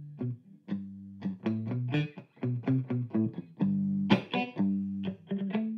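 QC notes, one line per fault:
Nothing to flag here; the audio comes through without any problems worth noting.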